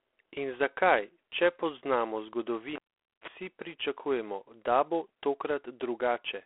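It's a speech clip run through G.726 ADPCM at what sounds like 24 kbit/s. Each sample carries only a few bits of difference from the predictor's guess, so there's a harsh, rasping hiss riding on the speech and swelling with its level. The band is telephone-narrow, roughly 300 Hz to 3.4 kHz, with nothing above 3.9 kHz. Then there's a cable pulled and plugged in, from 2.76 to 3.28 s. A pop, about 470 ms of near silence, a short 35 ms burst of 50 Hz mains buzz as the plug tip touches, and a second pop as the sound comes back.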